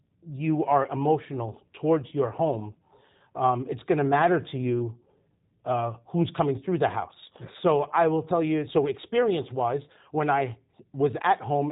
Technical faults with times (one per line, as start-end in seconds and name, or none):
0.00-11.72 G.729 codec